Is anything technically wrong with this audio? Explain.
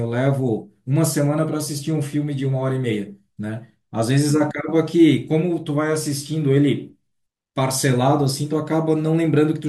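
No, nothing in this speech recording points to a technical problem with the signal.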